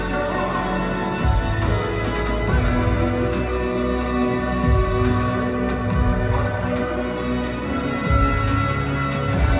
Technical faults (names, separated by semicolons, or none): none